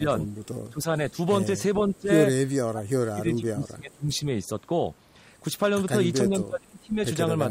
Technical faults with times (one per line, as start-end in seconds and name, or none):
0.00-0.05 speech suppressed in double talk
0.71-1.18 speech suppressed in double talk
1.78-2.10 speech suppressed in double talk
2.65-4.26 speech suppressed in double talk
5.89-5.96 speech suppressed in double talk
6.23-6.97 speech suppressed in double talk